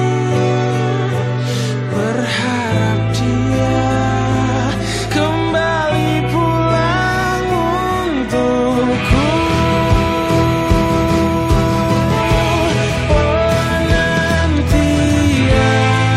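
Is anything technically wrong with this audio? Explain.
No, nothing technical stands out here, and the audio comes through without any faults to point to.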